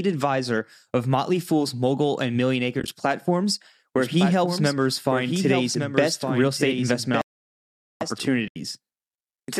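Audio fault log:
2.80 to 2.88 s: AAC frame loss with muting. About 50 ms of audio drops out in short soft-edged gaps scattered across 80 ms, none longer than roughly 20 ms, which fits five lost frames whose spectrum the decoder zeroed. The overlapping windows fade each gap down and back up, so the sound thins and flickers. That smooth fade is what separates it from a hard digital cut or a stall, which stops abruptly for much longer.
3.98 to 8.25 s: doubled audio track. A second full-band copy of the speech runs about one second behind the original at roughly 5 dB lower, and it cuts in and out sharply at the edges of this span. It carries no decay or room colouring, so it is not reverberation or an acoustic echo. A repeat this dry, exact and late most likely comes from the same audio being captured again through a slower path.
7.22 to 8.01 s: playback stall. The output goes fully silent mid-flow for about 795 ms and the speech then carries on. 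The length of the gap and its sudden start set it apart from the brief, faded codec dropouts. A gap like this is likely the player running short of data or having its thread blocked until it could resume.
8.48 to 8.56 s: AAC frame loss with muting. A soft-edged hole of about 80 ms, fitting eight lost frames, fades out and back in over the window overlap. It reads as a short void, still far shorter and gentler than the stall just before it.
Throughout, the speech has the light coding texture of what is likely low-delay AAC at 64 kbps, which is not a fault here.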